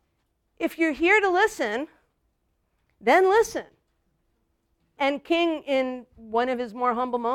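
A speech recording with nothing technically wrong to point to anywhere in it.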